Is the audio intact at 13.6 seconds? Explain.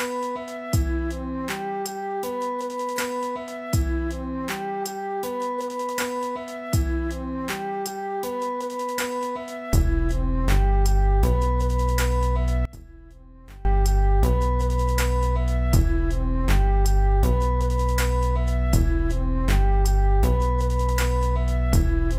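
No, from 12.65 to 13.65 s the sound drops by about 23 dB, likely one channel inverted, cancelling what both channels share when summed to mono.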